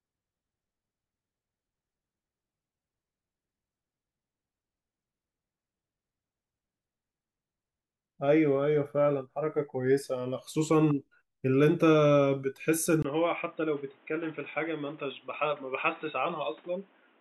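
At about 13.03 s, after a brief 20 ms gap, the speech turns dull and boxy through to the end, with nothing above 3.8 kHz, a slightly lower level and a new noise sitting well under it. That's likely the input switched to a poorer device.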